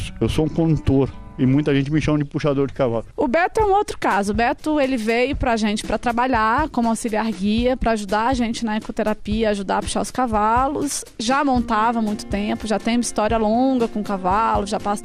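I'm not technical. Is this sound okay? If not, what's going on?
No, it isn't quite right. The whole clip, start to finish, sounds dull and muffled, with a watery, gurgly graininess. That's likely MP2 compression squeezed too hard: the top end gets switched off in chunks, and what's left turns rough and bubbly.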